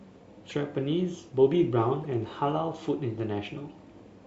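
At 0.49 to 0.52 s the audio briefly garbles and skips ahead, likely a broken MP3 bit reservoir: after a cut, a frame of about 26 ms decoded borrowed bytes from the wrong frame.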